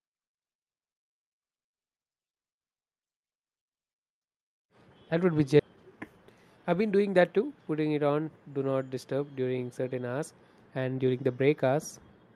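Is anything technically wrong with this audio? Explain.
Yes, there are two faults in this speech clip, close together near the middle.

The first is a skip ahead at 5.59 to 5.61 s, right after "would be". Roughly a second of audio never plays. That stretch was discarded, in transit or when an overfull jitter buffer threw it out, while later audio was already queued. Playback jumps straight to that later audio, and the two sides are butted together with no silence between them. That seamless join is what sets it apart from a dropout, which leaves an audible gap or a muted hole where the missing sound should be.

The second is a jitter buffer speed-up from 5.69 to 7.56 s, ending just before "putting it on do". After the jump the buffer was still holding more audio than its target. To pull the delay down, the receiver repeatedly cut out tiny slices a pitch period or so long, removing around 200 ms in total. 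The speech runs at about 111% of normal speed and sounds hurried. The pitch stays the same, which distinguishes this from a resampling or clock error, where speed and pitch rise together.

The call path's Opus coding, which fits a bitrate around 40 kbps, caps the bandwidth at about 12 kHz.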